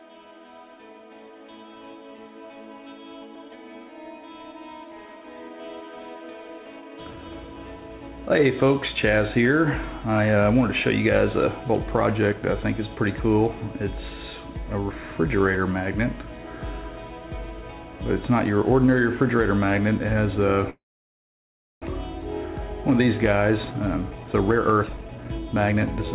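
At 20.7 s the sound stops short, trails off briefly, then leaves about a second of silence before resuming at 21.84 s exactly where it broke off, with nothing skipped. This call audio freeze likely came from delayed packets draining the jitter buffer, so the receiver stretched the last sound and then waited.

From 22.76 s to 26.06 s the audio sounds hurried but keeps its pitch, running at 125% speed. This jitter buffer speed-up trims the backlog that built up when the held packets arrived together: the receiver removes short pitch-period slices repeatedly, cutting around a second overall. Throughout, in the narrowband band that ends at 4 kHz, as expected from the call codec.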